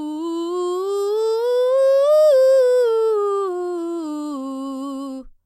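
Nothing stood out on listening to this music clip.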